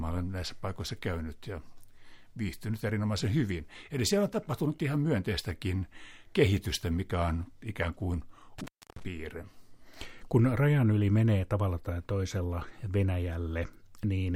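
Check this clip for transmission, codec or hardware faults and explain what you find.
One hardware fault is present. From 8.59 to 9.04 s the speech drops out for about 303 ms, with crackle at each edge and faint hiss in the gap. This is an intermittent contact: a loose cable or plug briefly opened the signal path.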